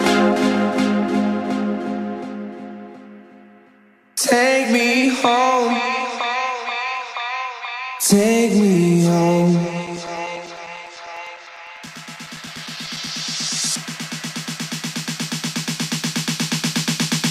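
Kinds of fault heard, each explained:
Periodic USB or driver dropouts: from 9.87 to 13.07 s, something stalls the USB bus or audio driver every 0.1 s, and each stall replaces a few milliseconds of audio with silence. About thirty evenly spaced ticks result, heard as a steady 10 Hz chatter over the signal.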